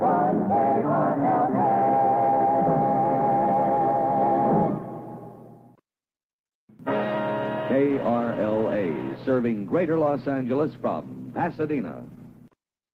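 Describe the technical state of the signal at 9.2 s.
At 9.2 s a call bitrate drop is in effect, running from 7.91 s to the end. The encoder codes more coarsely and trims high frequencies, which fits a fall from 48 to 14 kbps, leaving the sound rough, watery or muffled.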